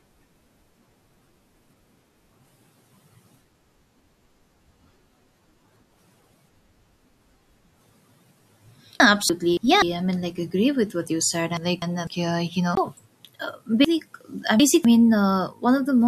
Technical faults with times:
3.75-4.25 chunks out of order
9.00-9.82 chunks out of order
9.29 CD skip
11.57-12.07 chunks out of order
12.75-12.77 CD skip
13.85-14.85 chunks out of order

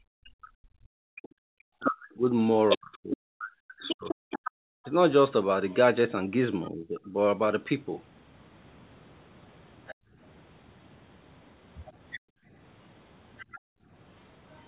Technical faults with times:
0.00-4.83 background gated by the echo canceller
0.24-6.70 other side's voice leaking through
1.79-7.14 speech suppressed in double talk
9.87-14.68 other side's voice leaking through
9.95-13.91 background gated by the echo canceller

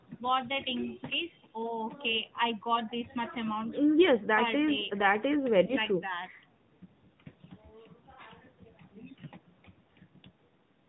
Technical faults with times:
0.00-10.89 AMR narrowband mobile codec
5.66-5.74 lost AMR speech frames

